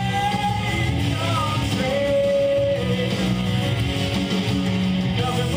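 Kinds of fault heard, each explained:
No technical fault can be heard in this audio. Nothing in the signal path stands out as needing attention.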